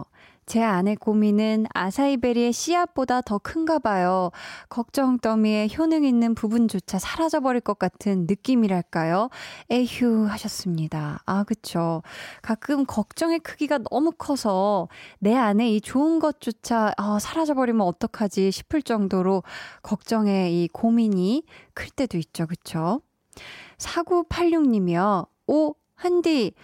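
No technical faults can be heard anywhere in the speech recording. Nothing in the audio calls for a timestamp or a closer look.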